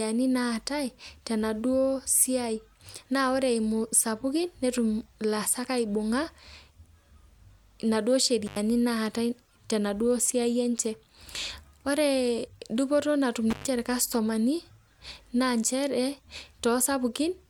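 At 8.46 s and again at 13.50 s, the speech drops out briefly with crackle at each edge. This is intermittent contact, a loose connection opening for about 88 ms, then 126 ms.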